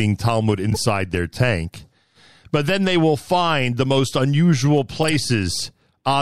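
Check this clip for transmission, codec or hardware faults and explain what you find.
Two corrupt frame decoded faults appear in this speech. From 0.70 to 0.78 s, just before "their tank", and from 5.03 to 5.10 s, just after "find the most unusual", the decoder played damaged compressed frames. Their flipped bits turned into wrong gains and misread codes, putting energy at the wrong frequencies. Each is a short, corrupted-sounding disturbance, peaking around -10 dBFS, hitting roughly two and three frames respectively.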